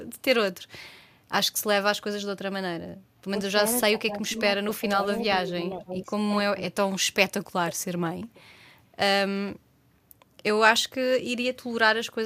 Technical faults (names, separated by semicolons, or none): speech suppressed in double talk; echo leak